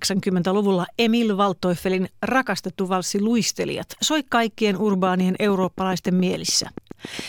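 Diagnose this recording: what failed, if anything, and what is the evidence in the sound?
A train of clicks runs from 4.93 to 7.20 s, evenly spaced at 7.07 per second and riding over the speech, likely interference in the analogue wiring or power supply rather than codec glitches.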